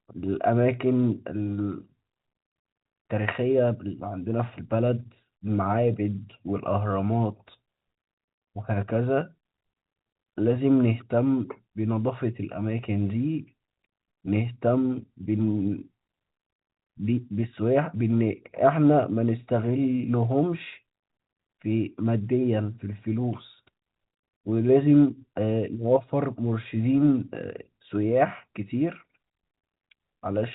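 No technical faults occur in this speech, so there is nothing to describe in time order.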